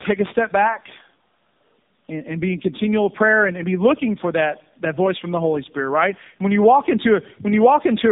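Speech passed through two low-rate speech codecs in a row, a tandem speech coding fault that fits a G.729A leg followed by AMR-NB. The second coder re-encodes the first one's damage, so throughout, the speech sounds rough, muffled and warbly, with nothing above 3.8 kHz.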